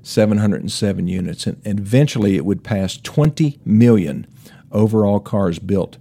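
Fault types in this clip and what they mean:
Periodic USB or driver dropouts: something stalls the audio path at a fixed rate, and each stall leaves a hole of a few milliseconds filled with silence. Here about seven occur roughly every 1.024 s from 0.17 s to 5.30 s, heard as regular ticks in the speech. On a waveform each is a brief flat gap with abrupt edges. On a spectrogram each shows as a thin, evenly spaced vertical line of broadband energy.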